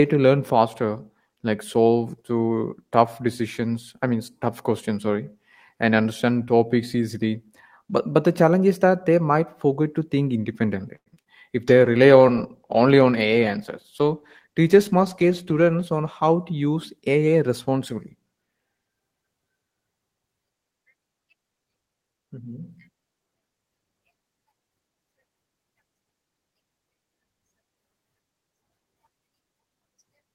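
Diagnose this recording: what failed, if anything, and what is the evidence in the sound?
At the network stage, packets were most likely held up in transit and the jitter buffer ran dry, a call audio freeze. From 10.95 to 11.08 s the speech stalls for 108 ms, about 70 ms of it silent, then resumes where it stopped. Nothing is lost, but the delay grows by 108 ms.

Further network losses reached the decoder as short concealed packet loss: 20 ms at 11.14 s and 40 ms from 11.22 to 11.28 s. The receiver extrapolated the preceding speech across each hole and then crossfaded back, so the sound briefly smears or wobbles.

At the codec stage, the call's bandwidth estimate fell and Opus was told to drop from 32 to 18 kbps, a call bitrate drop. From 11.68 to 16.41 s, including about 4.2 s at the lowest rate, coarser coding makes the speech rougher and duller.

A jitter buffer speed-up runs from 13.69 to 14.74 s. 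To drain excess buffered audio, the receiver removed short pitch-period slices, around 70 ms in total. The speech plays about 5% fast at unchanged pitch and sounds slightly hurried.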